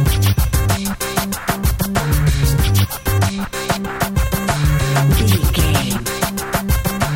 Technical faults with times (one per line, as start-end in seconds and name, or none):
none